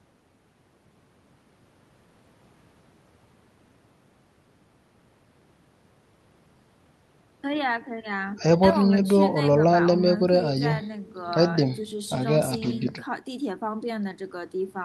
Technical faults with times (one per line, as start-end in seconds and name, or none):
none